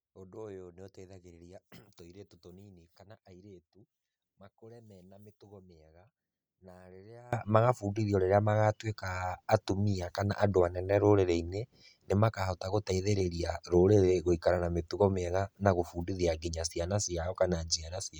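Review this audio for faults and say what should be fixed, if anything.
One channel inverted, 0.0 to 7.33 s, before "magabundithio rĩria magatuĩka atumia": the speech drops about 26 dB, likely because reversed polarity on one side cancels the shared centre in mono.

To prevent it, check channel polarity and audition a mono fold-down before release.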